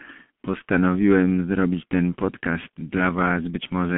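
G.723.1 codec damage runs through the whole of this speech recording, and it is heavy. Nothing survives above 3.5 kHz, and the low end thins out below about 200 Hz, so the voice sits in a narrow telephone band and sounds muffled. The coarse, slowly updated voice model over 30 ms frames leaves a hoarse, buzzy texture and smears consonants together, which fits a rate near 6.3 kbit/s.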